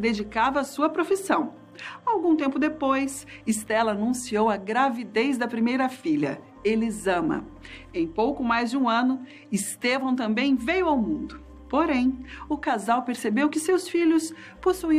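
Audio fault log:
Nothing to log here; I listened all the way along and didn't catch a single problem worth noting.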